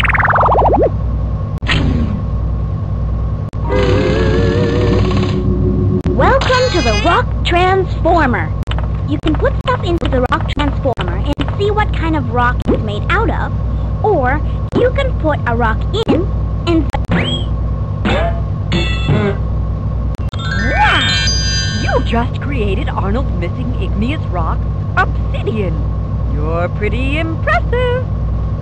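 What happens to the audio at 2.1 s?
Nothing goes wrong at 2.1 s; the audio plays through that moment intact, with no dropout, click or other disturbance.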